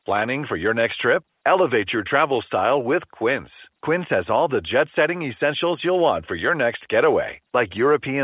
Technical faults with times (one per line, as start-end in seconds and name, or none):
none